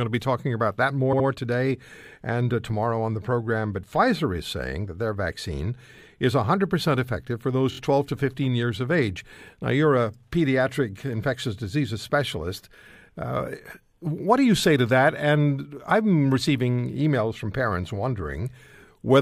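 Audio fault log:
1.12–1.26 s, repeated frames: Right after "be talking about that" and before "today and uh tomorrow", a 70 ms block of compressed audio is played twice more. This adds 139 ms and causes a short stutter.
7.71–7.78 s, repeated frames: After "effective for those", a single 23 ms frame is played three extra times. This adds 70 ms and sounds like a brief stutter.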